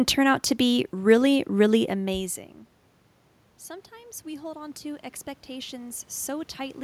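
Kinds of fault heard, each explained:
Automatic gain rising: The input level fell by about 20 dB, and the gain control responded by slowly raising its gain. The rise runs from 3.89 s to 6.79 s, almost three seconds, and adds only about 5 dB. So the level recovers only partly. Because the whole signal is boosted, the speech and the room noise behind it swell together. The room noise itself belongs to the recording.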